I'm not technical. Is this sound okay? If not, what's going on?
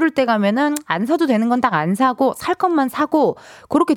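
No. At 2.37 s there is a single sharp click in the speech. It is likely caused by dropped samples: roughly one sample went missing, so the waveform jumps straight to a later value. The gap is far too brief to lose any sound.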